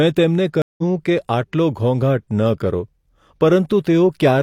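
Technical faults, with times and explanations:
0.62–0.83 s, stream reconnect: 163 ms of silence, then the speech resumes roughly a tenth of a second later, as the player reconnected with a fresh decoder mid-stream.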